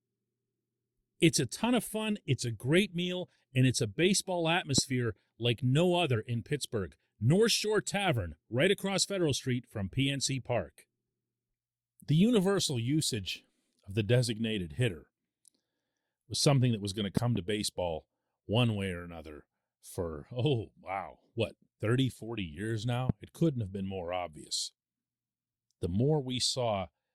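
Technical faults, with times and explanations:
4.78–4.80 s, 17.17–17.38 s and 23.09–23.12 s: loud pop. Single pops at the first and last times, two in quick succession at 17.17 s. Each peaks about 15 dB above the speech, which continues underneath. A sudden voltage pulse, likely from a switch or static, causes them.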